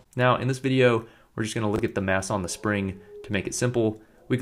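At 1.76 to 1.79 s the chunks arrive out of order: one 10 ms chunk plays two chunks late, after the two that should follow it. Nothing is missing, unlike a dropout. Instead there's a brief jumbled stutter with three hard joins.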